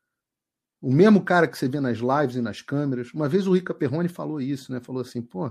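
From start to finish the sound has a watery, swirling quality, with a dulled top end and a warble as detail flickers in and out. This is the likely result of MP3 compression at a low rate, one that fits roughly 64 kbps. Short of bits, the encoder trims the treble at a fixed cutoff and discards weaker frequency lines, which drop in and out between frames and leave that unsteady, smeared texture.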